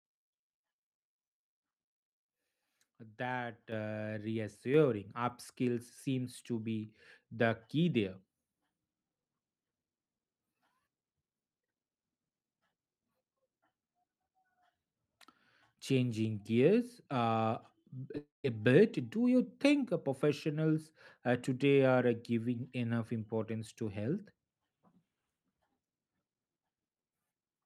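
Speech, with two sudden microphone volume steps and a break in the audio near 18 s. At 3.72 s the level jumps by about 8 dB, and at 4.74 s, just before "upskills seems to be", by about 4 dB more. The step is an automatic input-gain increase rather than the talker moving closer, because the background noise rises by the same amount at the same instant. At 18.15 s, right after "gears uh", roughly 10 ms of audio goes missing. This is short concealed packet loss. The receiver bridges the gap by extending the last sound, leaving only a tiny smear before real audio briefly resumes. Its brevity and quick recovery set it apart from what follows. From 18.18 s to 18.45 s, 260 ms of audio is lost, likely from a long network dropout. The concealment buzz fades out into about 140 ms of silence, and the sound resumes at "bit do you think" with the missing portion skipped entirely.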